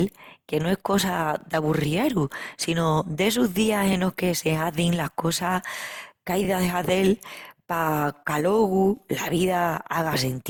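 Throughout the speech there is a swirly, hollow smearing with blurred consonant onsets, worse than a single pass at the bitrate it points to, around 64 kbit/s Opus. That is generation loss, likely from roughly seven re-encodes piling up noise, unlike one low-bitrate encode's steadier coarseness.

Overlapping chunks then cause brief stutters at 1.41–1.43, 3.93–3.95, 6.45–6.47 and 8.97–8.99 s, where 20 ms replays at each join of 2.5 s chunks. The regular spacing and the doubled sound, not a gap, distinguish them from dropouts.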